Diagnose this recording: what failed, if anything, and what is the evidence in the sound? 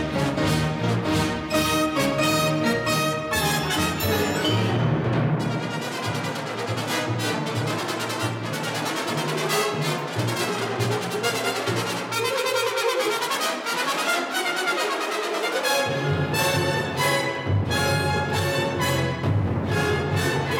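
Nothing in the recording points to a failure at any stage of the chain. No event in the sound calls for a diagnosis.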